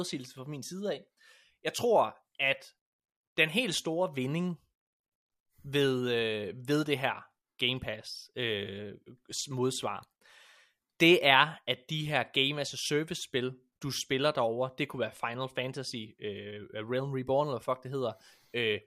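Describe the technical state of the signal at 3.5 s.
The speech at 3.5 s comes through intact, with no audible technical fault at that moment.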